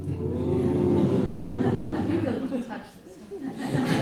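A clip of everyday sounds with two interruptions close together. The first is a call audio freeze from 1.25 to 1.60 s. The sound stops moving and the last moment is stretched into a fading buzz or hiss for about 330 ms. It never drops to silence. When the sound resumes, it picks up where it stopped, so nothing is lost. Everything after it runs about 330 ms late. The likely cause is packets held up in transit until the jitter buffer ran dry.

The second is a long network dropout from 1.74 to 1.94 s. Again the last sound is carried on as a fading buzz or hiss, this time for about 180 ms, without reaching silence. Here the sound comes back further along. The 180 ms that should have played in that gap is simply gone. This likely comes from packets that never arrived at all.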